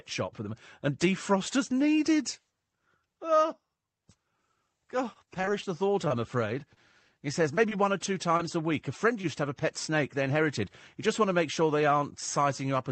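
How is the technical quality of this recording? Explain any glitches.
The speech has audible packet-loss damage: one choppy stretch and several brief dropouts, all in the middle of the clip. The call path limits the sound to about 8 kHz.

Repeated packet loss (robotic sound) runs from 5.13 to 6.12 s. Six separate gaps, none longer than 22 ms, were each filled by extending the preceding sound before the next gap arrived. About 11% of that span is synthetic, giving a choppy, robotic texture.

Short concealed packet loss occurs at 6.74–6.78, 7.55–7.59, 7.69–7.73, 8.37–8.41 and 9.21–9.25 s. The second and third come just before "one or two", and the last just before "to have a pet". Each loses about 20 ms, which the decoder bridges by continuing the last pitch or noise before blending back. The result is a brief smear or wobble.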